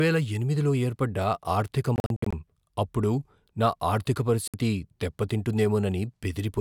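Between 1.96 and 2.33 s the speech breaks into short silent holes totalling about 203 ms, the longest 61 ms, and at 4.48 s a single 61 ms hole cuts in. Each gap resumes as if playback had continued, a Bluetooth dropout likely caused by packets arriving too late.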